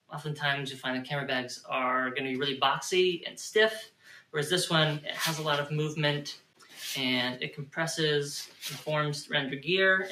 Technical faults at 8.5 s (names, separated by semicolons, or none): noise suppressor applied to music or sounds; sound cut by the noise suppressor